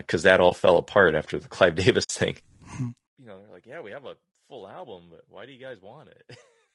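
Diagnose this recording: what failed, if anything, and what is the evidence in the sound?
The speech is rough and grainy throughout, with noise filling the gaps between pitch harmonics and a top band that sounds thinned and somewhat synthetic. The stage is the codec, likely low-delay AAC compression of the AAC-ELD type used in video calls. Its short transform frames resolve harmonics coarsely and spend bits inefficiently, so at a rate that the sound suggests is around 32 kbps, the damage is plainly audible on every phrase.

AAC frame loss with muting occurs twice, at the network and decoder stage. At 0.49 to 0.52 s, between "uh that" and "fell apart after the", the sound dips briefly for about 20 ms, which fits a single lost frame. At 2.03 to 2.10 s there is a longer hole of about 60 ms, which fits three consecutive frames. The decoder zeroed the missing spectra, and the overlapping windows fade the edges, so the single loss is a brief dip and the run is a soft-edged hole.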